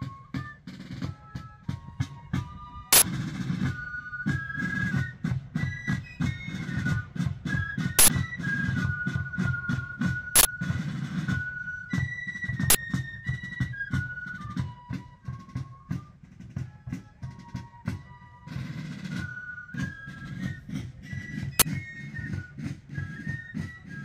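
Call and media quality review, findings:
Uninitialised buffer, five events: short, loud bursts of digital noise at 2.93–3.02 s, 7.99–8.08 s, 10.36–10.45 s, 12.70–12.75 s and 21.60–21.62 s. Playback path; a block was sent out before audio was written, so stale memory played as samples. Lengths of about 93, 46 and 23 ms fit 4096-, 2048- and 1024-sample buffers. Unlike a dropout, the block is filled with loud noise rather than silence. Unlike a single-sample click, it lasts a full block.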